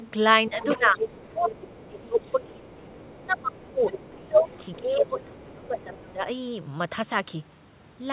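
From 0.0 to 0.1 s a faint second voice sits about 20 dB under the speech. That is the other side's voice leaking through, likely loudspeaker echo the canceller failed to remove. It returns from 0.55 to 1.86 s at about 15 dB down and from 2.2 to 6.12 s at about 25 dB down. It stands apart from the suppression faults because it adds a voice rather than taking level away from the talker. Like everything here, it is band-limited, with nothing above 4 kHz, which fits a narrowband G.711 call path.

Overlapping those stretches, the talker's own speech is suppressed in double talk. Between 0.49 and 0.98 s it dips by around 10 dB in patches totalling roughly a third of a second. Between 1.34 and 3.85 s and again between 4.19 and 6.25 s it drops by around 20 dB, each time for about two seconds in pieces. The likely cause is the canceller attenuating everything while both sides spoke. Unlike the leakage, the main voice itself sinks or breaks up.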